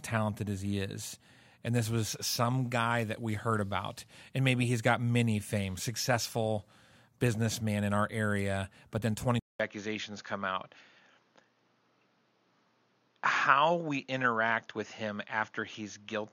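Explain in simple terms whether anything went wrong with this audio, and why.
Input switched to a poorer device at 9.40 s: after a 0.2-second gap, speech turns duller, with nothing above 6.8 kHz, likely from a lesser microphone taking over.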